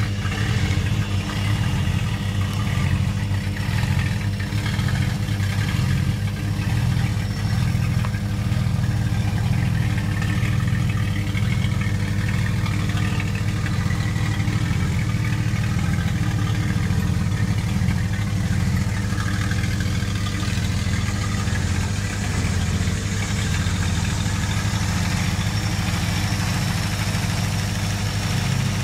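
Mains hum runs through the whole clip: a steady low tone at 50 Hz with a few low harmonics, roughly as loud as the wanted sound itself. Power-line current has leaked into the signal, likely through a ground loop or a nearby transformer.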